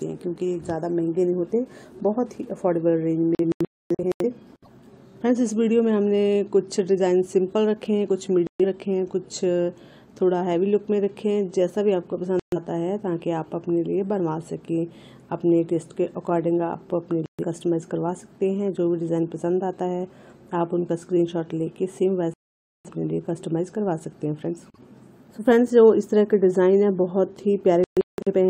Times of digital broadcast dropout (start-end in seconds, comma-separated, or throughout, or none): 3.35-4.25, 8.47-8.65, 12.39-12.57, 17.26-17.44, 22.34-22.89, 27.84-28.33